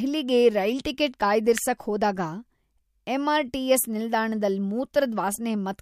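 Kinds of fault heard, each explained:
Electrical switching spike: A single sharp snap at about 1.58 s, lasting roughly a millisecond and sitting on top of the speech rather than replacing it, peaking at around -10 dBFS. The shape fits an arc from a nearby switch, motor or static discharge, likely coupled into the audio line as a brief voltage transient. There is no cluster of follow-up clicks, just the one isolated impulse.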